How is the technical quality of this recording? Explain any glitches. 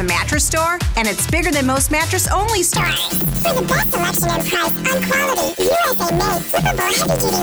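The first part is clean, but from 2.77 s to the end the audio is damaged by planar audio read as interleaved. Each 11.6 ms block, which fits a 512-sample planar block, holds all left samples and then all right samples, but it is read as alternating pairs, so each block plays twice at double speed. Because the blocks are so short, this produces a robotic buzz at about 86 Hz rather than an octave jump. On a spectrogram, the buzz shows as sidebands spaced about 86 Hz apart. The waveform shows a repeating pattern that resets every 11.6 ms.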